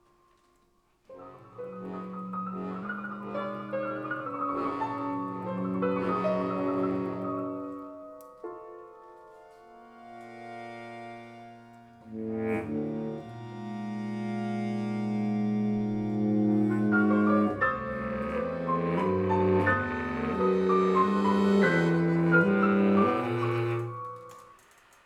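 From 2.83 to 4.26 s, a wrong sample rate fault, which fits 44.1 kHz material played at 48 kHz, runs the sound 1.09 times fast and about 1.5 semitones high.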